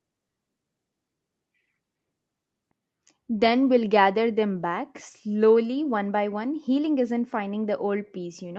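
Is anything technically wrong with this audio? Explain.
No, nothing is technically wrong.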